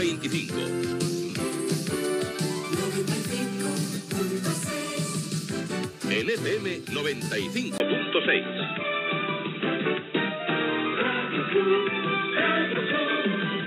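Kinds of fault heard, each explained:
Input switched to a poorer device: the input likely changed to a narrower-band microphone or headset at 7.78 s. After a 20 ms gap, nothing above 3.8 kHz remains, so the sound turns dull and boxy, shifts level by around 5 dB, and gains faint new background noise.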